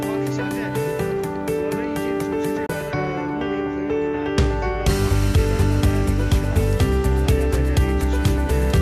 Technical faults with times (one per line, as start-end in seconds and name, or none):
2.66-2.70 digital broadcast dropout